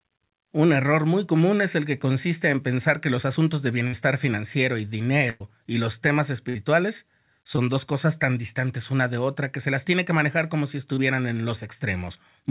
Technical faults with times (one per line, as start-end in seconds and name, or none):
3.87-3.94 burst of packet loss
5.30-5.41 burst of packet loss
6.49-6.56 burst of packet loss
7.56-7.58 short concealed packet loss
10.94-10.98 short concealed packet loss